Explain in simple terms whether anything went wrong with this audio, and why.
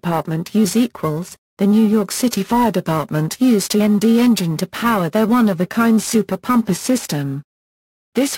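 Yes, something's off, and it runs through the whole clip. It's periodic clock jitter: the clock that times the conversion of the sound is being wobbled at a steady rate, around 1 kHz here. That wobble adds extra tones just above and below everything in the sound, and it gets worse the higher the pitch. So what you hear is a rough, metallic edge riding on the audio, which drops away whenever the sound goes quiet.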